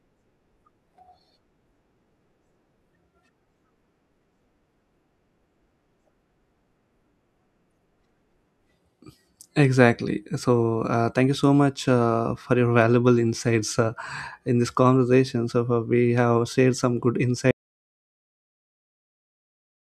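At 17.51 s, right after "have shared some good", the speech cuts off into an audio dropout to silence. Total silence, no room tone, runs to the end. Input was likely lost.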